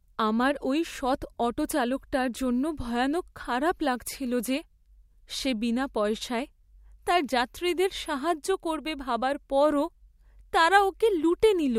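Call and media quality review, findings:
Nothing stood out on listening to this speech recording.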